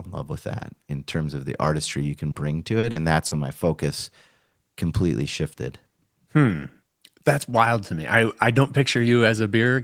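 Short concealed packet loss at 2.31, 2.79, 2.91 and 3.27 s, after "the artistry you can" and before "my focus": about 40 ms of audio each time went missing and was filled by extending the preceding sound, heard as brief smears.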